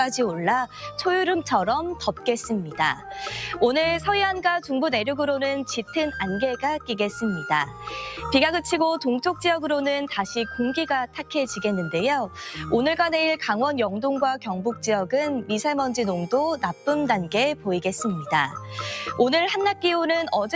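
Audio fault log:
Throughout: noise suppressor applied to non-speech sound. A suppressor built for speech stays active and treats steady, sustained parts of the sound as noise, so its gain keeps moving by about 5 dB. Onsets pass almost untouched while held tones, ambience and reverb tails are pulled down, which gives a pumping, fluttering, thinned texture. Unlike a compressor, which reacts to loudness, this gain tracks how steady the sound is, so quiet transients survive and loud sustained passages still sink.
7.66–7.89 s, 11.07–11.31 s, 18.55–18.71 s: sound cut by the noise suppressor. In each window, lasting around a fifth of a second, the suppressor judges a sustained or decaying portion to be noise and ducks it harder than the surrounding material. The drop is about 7 dB, then about 11 dB at 11.07 s, then about 5 dB. Unlike a dropout, the sound never goes silent. It sags and then recovers, with any attack inside the window mostly coming through.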